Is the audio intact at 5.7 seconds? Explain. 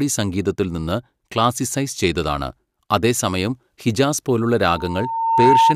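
No. A loudspeaker feedback squeal runs from 4.62 s to the end, after "ചെയ്തതാണ് അതേസമയം ഹിജാസ് പോലുള്ള". The microphone re-amplifies its own loudspeaker output at 908 Hz, where loop gain exceeds one, so a pure tone swells over about a second to roughly 10 dB above the speech.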